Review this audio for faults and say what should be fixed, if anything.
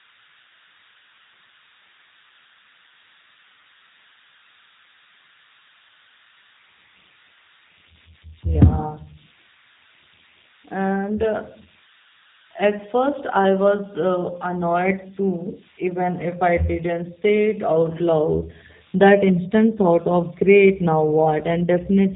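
Converter idle tones run throughout: a tone near 1.5 kHz, about 28 dB below the speech, from an undithered delta-sigma converter cycling on small inputs. Unlike mains hum, the pitch isn't harmonic. Adding dither at the converter prevents it.

G.729 codec coding also runs throughout: nothing passes above 3.8 kHz and the speech sounds rough and synthetic, which fits an 8 kbit/s G.729 stream. Unlike plain low-pass filtering, the voice itself is degraded. Using a wideband codec at a higher bitrate prevents it.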